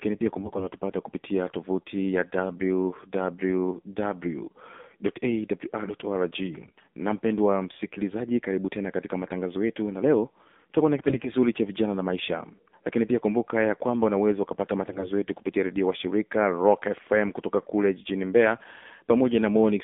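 Throughout, the speech carries AMR narrowband mobile codec damage. Everything sits between 200 Hz and 3.6 kHz, and a spectrogram shows a hard ceiling with nothing above it. The voice sounds buzzy and synthetic, which fits a low AMR-NB rate near 7.4 kbps.

There are AMR bit errors at 0.38–0.69 s before "kupitia tovuti ya", at 6.52–6.86 s before "na mpendwa msikilizaji karibu", at 10.95–11.29 s, and at 14.9–15.1 s between "ya kwamba unaweza ukapata" and "yetu kupitia redio wa". Roughly 4 to 10 percent of the weakly protected bits were flipped, which misplaces the excitation pulses. Pitch and level hold, but the voice turns hoarse and gargly. On a spectrogram the harmonics smear into scattered grit.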